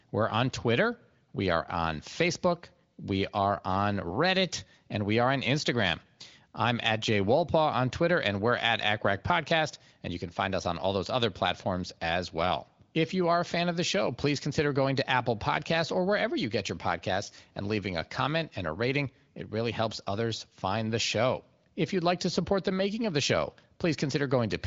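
Nothing stood out on listening to this speech, which comes through the AMR wideband (HD Voice) codec at 18.25 kbit/s with nothing above about 7.6 kHz.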